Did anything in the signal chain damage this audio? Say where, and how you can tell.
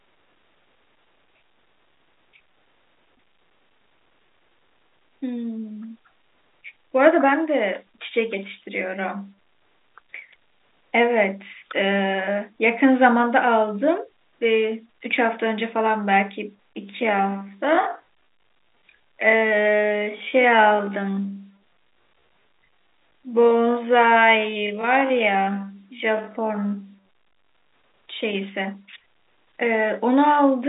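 Yes. From 16.79 s to 27.69 s the speech runs at about 0.57 times its normal pace while its pitch holds steady, most likely a time-stretch applied at a processing or editing stage to fit the audio to a longer slot. Holding pitch while slowing means short fragments are being repeated to pad the length, so that stretch drags, with a sudden drop in pace at the start and a jump back at the end, all inside the telephone band that stops near 3.8 kHz.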